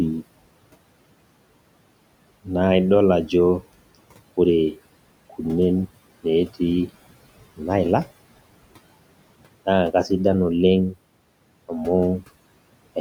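Throughout the 13 seconds, noise suppressor artifacts pump the room noise: it drops by about 21 dB between words and returns under speech, band by band rather than gate-like all-or-nothing muting.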